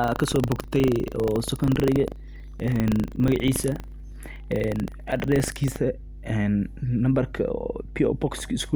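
Right from the start, and for the whole clip, there's mains hum: a steady 50 Hz drone sitting roughly 15 dB under the speech, with a bit of low harmonic weight on top. That's the power line leaking into the signal path, most likely through a ground loop or a transformer sitting too close to the cabling. It never lets up, so you hear it under the pauses as well as under the talking.

Also from 0 s, running until about 5.77 s, there's buffer tearing, heard as a robotic 25 Hz rattle riding on the speech and dropping away whenever the signal does. What's happening is that the software filling the ring buffer and the hardware draining it have drifted into each other, so every period they cross. A small slice of each buffer, something like a twenty-fifth of it, ends up holding audio from roughly 70 ms earlier, which points to one lap of the buffer. Hard joins on either side of that stale slice repeat at the 25 Hz buffer rate, and that produces the buzz. 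After 5.77 s the rattle is gone and only the hum is left.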